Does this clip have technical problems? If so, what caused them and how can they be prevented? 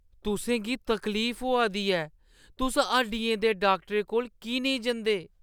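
No, nothing stood out as a technical problem on listening to this speech recording.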